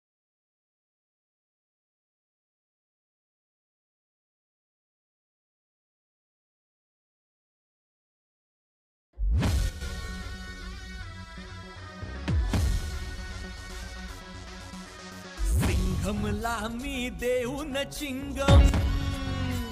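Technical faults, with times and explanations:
9.69–9.81 s, sudden gain jump: sound and background noise drop together by about 7 dB, likely a gain change applied without a ramp; the waveform envelope steps down abruptly.
18.48–18.69 s, sudden gain jump: level and noise floor leap up by about 9 dB at once, seen as a sharp vertical step in waveform height and spectrogram brightness.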